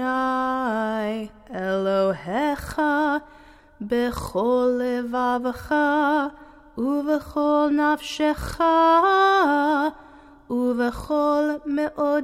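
No technical faults can be heard anywhere in the recording.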